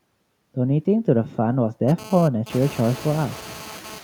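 Noise suppressor artifacts run throughout: steady noise is pulled down by about 12 dB frame by frame, so the background dips between phrases and swells beneath the speech, and the room noise rises around 2.5 s. GSM phone buzz sits from 1.88 to 3.99 s: a nearby phone's data bursts at 217 Hz are rectified into a harsh, harmonic-rich rasp about 19 dB below the speech that cuts in and out.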